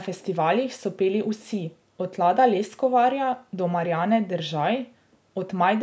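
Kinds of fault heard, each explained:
No fault can be heard anywhere in the recording. The call microphone processing shows only as a lack of the lowest bass and nothing above 8 kHz, which is normal for that path.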